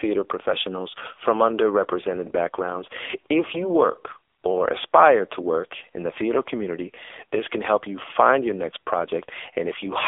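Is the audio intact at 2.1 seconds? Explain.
No. At 2.1 s the speech carries AMR narrowband mobile codec damage, present throughout the clip. Everything sits in a 300 Hz to 3.5 kHz band, with nothing above 3.6 kHz. The vocal-tract model sounds heavily starved, pointing to a low bitrate near 6.7 kbps. The voice comes out buzzy and synthetic.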